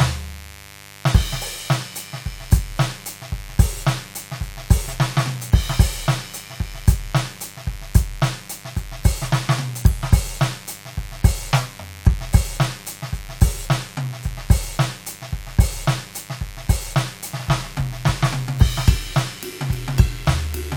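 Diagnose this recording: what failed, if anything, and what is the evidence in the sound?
Mains buzz runs through the whole music recording, a steady raspy buzz sitting roughly 20 dB below the music. It points to the analogue wiring: a dimmer, rectifier or poor shielding injects switching spikes on a 50 Hz supply, spraying harmonics into the kilohertz range.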